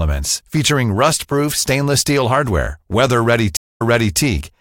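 At 3.57 s a stream reconnect cuts the speech for 0.22 s. Playback then resumes about 0.39 s earlier, repeating audio, until 4.18 s.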